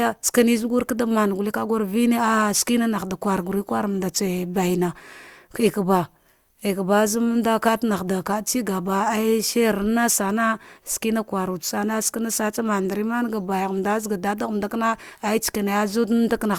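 Nothing technical stands out in this speech recording; there's no fault to point to anywhere along it.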